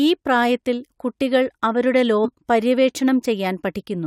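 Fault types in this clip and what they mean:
Damaged data in a compressed stream: a brief glitch cuts into the speech from about 2.24 to 2.26 s, lasting roughly 20 ms. Part of the encoded stream at that point was corrupted, so the decoder could not read the affected frame correctly, lost its place in the bitstream and had to hunt for the next valid frame header before normal playback resumed.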